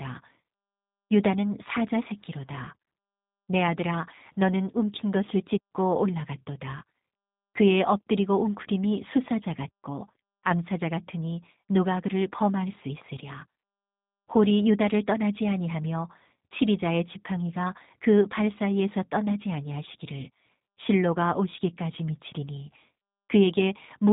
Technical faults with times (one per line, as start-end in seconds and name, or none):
0.00-24.13 G.729 codec